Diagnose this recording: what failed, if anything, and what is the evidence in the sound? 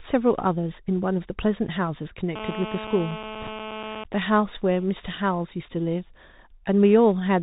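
The whole clip went through a Bluetooth CVSD headset codec, so this is a codec-stage problem from start to finish. The speech is hard band-limited, with nothing above 4 kHz, and there's a grainy hiss under everything. The s sounds come out scratchy, and loud bright bits smear because the one-bit delta modulator's adaptive step can't climb fast enough to follow them. That all fits a 64 kbps CVSD link, and the damage is plainly audible.

From 2.36 to 4.04 s there's GSM phone buzz: a hard, raspy drone at 217 Hz with a stack of harmonics, sitting about 10 dB below the speech and ignoring whatever the talker does. That's analogue-side pickup. A 2G handset close by was on a call, pulsing its transmitter 217 times a second, and the audio wiring or input stage rectified those radio bursts into the audio path.

Inside that buzz, from 3.41 to 3.49 s, there are bit errors on the Bluetooth voice link. 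You get a short patch of rushing, crackly noise over the speech but no sharp clicks. In CVSD no bit outweighs the others, so a flipped bit only nudges the waveform by a step that scales with the speech level, and the error fades out again. The density of crackle points to something around a 2 percent error rate over that stretch.

Right after, from 4.14 to 4.98 s, come GSM signalling bursts. It's a run of even ticks with a longer 217 Hz buzz twice a second, roughly 25 dB under the speech. It's the same nearby phone, still in its call, but its user has gone quiet, so it transmits only intermittent groups of bursts. The same analogue circuitry is rectifying them, which is why you hear the clipped rhythm instead of a steady drone.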